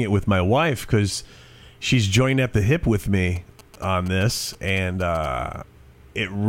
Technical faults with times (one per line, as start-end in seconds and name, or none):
3.36-5.26 GSM signalling bursts